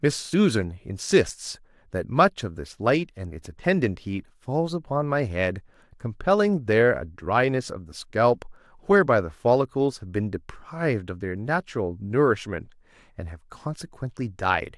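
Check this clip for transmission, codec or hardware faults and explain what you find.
Nothing stood out on listening to this speech recording.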